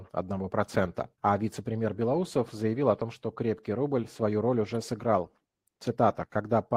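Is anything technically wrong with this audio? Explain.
No, nothing technical stands out here; the speech comes across without any audible faults.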